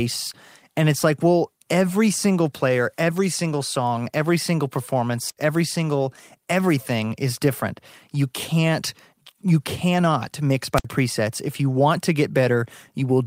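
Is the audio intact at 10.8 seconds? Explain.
No. A wireless microphone squelch dropout runs from 10.75 to 10.85 s. The radio link fades, and the receiver's squelch cuts the output for about 62 ms. Hiss or static rises briefly, then near silence, then the speech returns.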